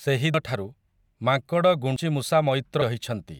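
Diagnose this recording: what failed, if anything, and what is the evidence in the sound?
Dropped buffers (overrun) at 0.34 s, 1.96 s and 2.82 s: each is an abrupt jump forward in the speech, no silence between the two sides. The first two skip roughly 150 ms, and the last about twice that. The stage is most likely the driver or buffer layer, where the capture application failed to read its samples before the hardware overwrote them.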